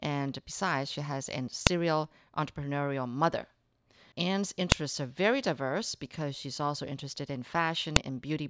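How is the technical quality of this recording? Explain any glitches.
The recording has three sharp clicks, at 1.67 s, 4.72 s and 7.96 s, from a file header played as audio. Each marks a join where a new piece's header bytes were decoded as samples, giving a brief loud snap regardless of the speech around it.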